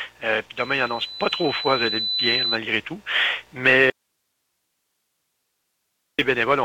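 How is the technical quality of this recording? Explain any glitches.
The recording has one clear technical fault, a dropout lasting over two seconds near the end.

From 3.90 s to 6.19 s there is an audio dropout to a faint residue. The likely cause is a break in the signal feed while the path downstream stayed powered and open, so nothing was muted. For about 2.29 s the audio cuts out abruptly and only a low hiss remains, roughly 55 dB below the normal level, before the sound returns just as suddenly.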